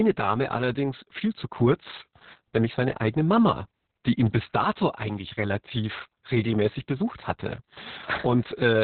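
Throughout, the speech sounds muffled, hoarse and slightly robotic, with nothing above 4.3 kHz: heavy Opus voice compression, pointing to narrowband SILK coding at about 6 kbps.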